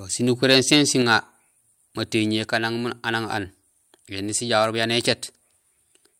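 From 0.51 to 0.75 s the loudest speech peaks are flattened and crackle harshly: microphone overload, likely from input gain pushing peaks about 3 dB past the converter's limit. At 1.02 s voice and background drop together by about 4 dB in one step, a microphone volume step-down likely made by the call software reacting to that clipping.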